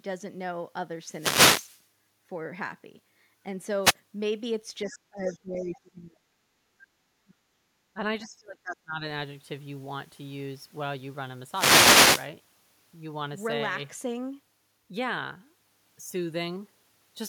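A speech recording with three kinds of fault. Wireless microphone noise hits appear as bursts of static at 0.98–1.88 s, 3.82–3.94 s and 11.48–12.32 s, where the FM radio link fades and receiver noise rises. Unlike the dips below, these add noise rather than removing level. Between 4.84 and 5.79 s, brief scraps of a second voice surface at about 20 to 30 dB under the talker (4.84, 5.28 and 5.74 s): the other side's voice leaking through, likely loudspeaker echo the canceller missed. This is a distinct voice, not hiss. Over 4.88–6.24, 7.23–7.47, 7.94–8.00 and 8.22–9.04 s the talker's voice itself dips by up to about 30 dB with no added noise, speech suppressed in double talk, likely the echo canceller ducking both sides while they overlap.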